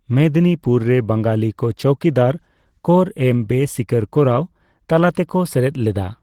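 From start to finish the speech sounds muffled, hoarse and a bit grainy, likely Opus compression in hybrid speech mode at a low bitrate, something like 16 kbps.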